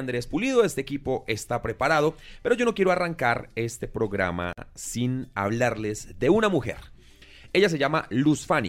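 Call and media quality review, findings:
Gap at a join of encoded pieces, 4.53 to 4.58 s: roughly 48 ms silence cuts into continuous sound, edges smeared, then resumes where it stopped. Separately encoded segments concatenated untrimmed; encoder start delay plus final-frame padding kept. Spacing suggests 6 s segments.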